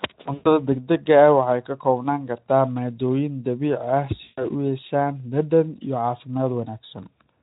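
At 0.33 to 0.49 s and again at 4.23 to 4.45 s, the speech smears into a buzzy tone or coloured noise that fades and stays weak briefly afterwards. This is VoIP packet loss concealed by the speech codec: the Speex decoder extrapolated from its last pitch and filter across about 120 ms and 140 ms of missing audio.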